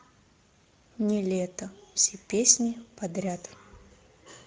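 A short speech recording with Speex codec damage throughout. The voice sounds noisy and hoarse, which fits Speex CELP coding at about 16.8 kbps starving the excitation of bits.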